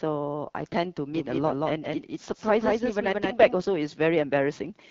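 A speech recording, coded with the AMR wideband (HD Voice) codec throughout. The sound has a rough, raspy edge, and the top band sounds like hiss rather than detail. The coder models speech up to 6.4 kHz from a pulse-driven vocal tract. It fills the band from 6.4 to 7 kHz with shaped noise. The damage is plainly audible, which fits one of the two lowest modes, around 8.85 kbit/s. From 1.14 to 3.54 s there is a doubled audio track. A second full-band copy trails about a fifth of a second behind. It is a few decibels quieter, about 5 dB down. It has no decay or room colour, and it starts and stops abruptly. The likely cause is a second capture of the same signal through a slower path, mixed back in.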